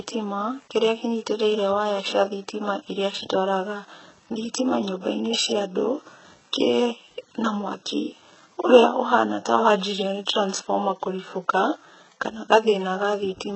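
Throughout the speech, the encoder spends very few bits on the lower band and rebuilds the treble from copied lower bands, which points to HE-AAC compression at roughly 8 kbps as the likely cause. Nothing reaches above 8 kHz, and the synthetic top end leaves s sounds heavily gritty, lispy and metallic.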